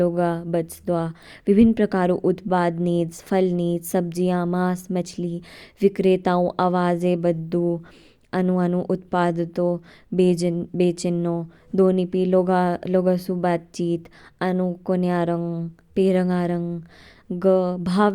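A speech recording, and nothing in it sounds technically wrong at any point.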